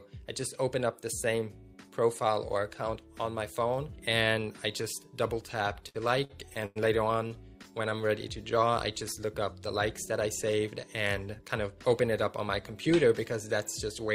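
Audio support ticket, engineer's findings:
Repeated stalls (stutter), 5.63–6.78 s: jitter buffer repeatedly empty, nine holds totalling 265 ms, longest 100 ms. Recurring drag, unlike a single late-packet stall. Nothing missing.

Short stall from a late packet, 7.28–7.32 s: one packet late, receiver stretched the last sound for 26 ms, then resumed at the same point. Single brief hold, not sustained slowing.

Jitter buffer slow-down, 7.82–9.26 s: buffer refilling by repeating pitch periods, 102 ms added, playback at 93% speed. Pitch unchanged, unlike a clock or sample-rate mismatch.

Jitter buffer speed-up, 11.31–12.25 s: excess buffered audio trimmed by dropping pitch periods, about 70 ms removed, 108% speed. Hurried, same pitch, with no gaps or dropouts as in packet loss.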